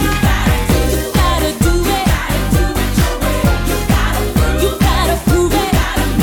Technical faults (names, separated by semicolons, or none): none